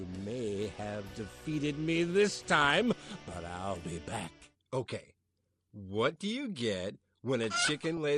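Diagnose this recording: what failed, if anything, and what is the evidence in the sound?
The codec stage is at fault throughout. The whole recording sounds dull, with a gurgling, granular texture as upper sub-bands drop in and out. The likely cause is MP2 compression short of bits. The damage fits a rate of about 80 kbps.

DAB burbling appears at 2.49 to 2.83 s, 6.05 to 6.16 s and 7.90 to 7.98 s. The bursts hit 20, 11 and 10 frames respectively. A small fraction of bit errors from weak reception escaped error correction. Corrupted samples put short blips of noise in single sub-bands.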